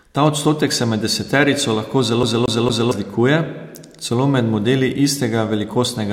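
A CD stuck on one turn appears from 2.23 to 2.91 s, right after "se med deseterico lahko". A scratch keeps knocking the laser back by one track, so the same stretch of about 0.23 s of speech is played three times in a row. Each jump back leaves a brief mute, giving the rapid, evenly spaced stutter of a skipping disc before playback moves on.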